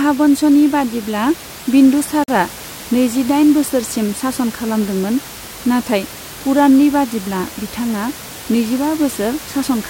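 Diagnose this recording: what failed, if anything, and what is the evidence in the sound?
At the playback stage, the time stamps of two consecutive stream segments left a hole, producing a gap between stream segments. From 2.24 to 2.28 s the speech drops out for about 43 ms with hard edges, even the room noise vanishing, then resumes without any audio lost.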